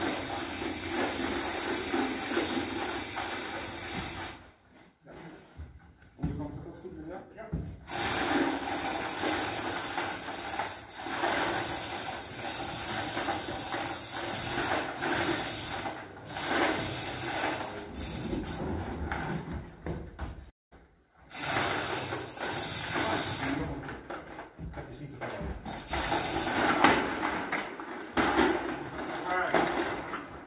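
At 20.5 s the sound breaks off into a fading buzz that thins to silence until 20.73 s, likely a long network dropout, with about 220 ms lost and concealed. The waveform shows decaying repeated cycles flattening out; the spectrogram shows smeared bands, capped at 4 kHz by the G.711 codec, fading to a blank column.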